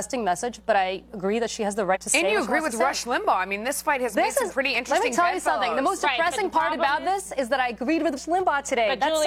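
Compressed frames skipped at 1.91–1.97 s and 8.13–8.19 s: whole 46.4 ms frames never reach the output, so the audio lurches forward by about a fifth of a second and then about 0.15 s, which points to three or four lost frames.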